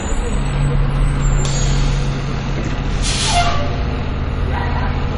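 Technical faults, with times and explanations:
Throughout, MP3 compression. Nothing is heard above 10.5 kHz, so the top end is plainly dull and flat. The sound is smeared and watery, with a swirling quality in the upper range. This is likely an MP3 encoder starved of bits. The encoder cut the treble at a fixed point and dropped weak frequency lines, which flicker on and off between frames. The damage fits a low bitrate of about 37 kbps.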